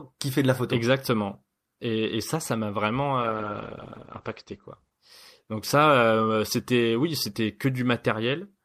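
After "ça ça m'a vraiment", at 3.22 s, a call bitrate drop cuts coding from 48 to 11 kbps. Speech turns coarse and muffled above 8 kHz. It clears by 6.23 s, before "c'était oui c'était".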